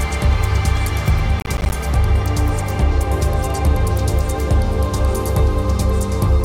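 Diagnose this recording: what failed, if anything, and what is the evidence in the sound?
Processor overload crackle at the driver/buffer stage, 1.40 to 1.74 s: a burst of hard-edged silent gaps, as about 15 buffers of about 10 ms missed their deadlines again and again over that stretch.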